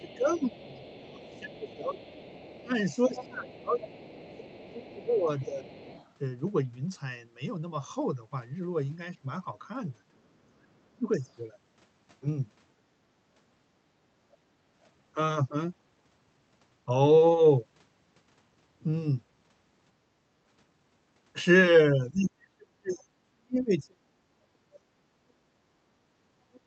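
Other side's voice leaking through, from 11.12 to 11.32 s: a brief, very faint second voice sits far below the main speech. The likely cause is the far end playing on a loudspeaker, with the echo canceller leaving a short scrap of it in the microphone signal.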